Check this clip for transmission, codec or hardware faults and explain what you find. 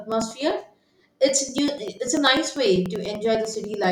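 The clip has one hardware fault, periodic USB or driver dropouts, from 0.12 s to 3.84 s. Every 98 ms, something stalls the USB bus or audio driver, and roughly 2 ms of speech is skipped outright, around forty times. The splices leave ticks, producing an even ticking of about ten per second that follows the speech.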